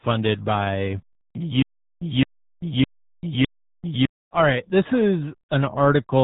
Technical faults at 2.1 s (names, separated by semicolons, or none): RealAudio 14.4 codec; stutter with silent gaps